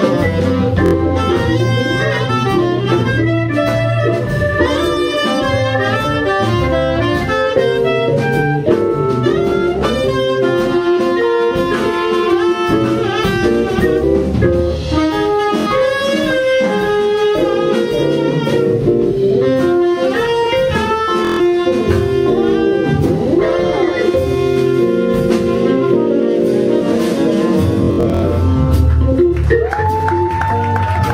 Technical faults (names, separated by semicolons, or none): Bluetooth stutter